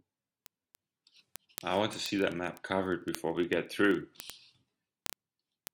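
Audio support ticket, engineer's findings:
Word clock ticks, 0.11 s to end of clip: sharp ticks of uneven strength roughly every 30 ms, around two hundred in all. Receiver likely not locked to sender's clock, slipping one sample each time. Spectrogram: evenly spaced full-height vertical lines. Waveform: single-sample glitches.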